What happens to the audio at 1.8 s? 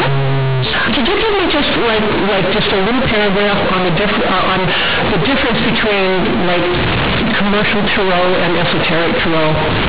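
Companded audio read as linear is present at 1.8 s, as it is across the whole clip: A-law telephone bytes are played as raw 8-bit samples without expansion, so each sign change swings the waveform across half its range. The speech comes out harsh, loud and buzzy, with heavy noise in pauses.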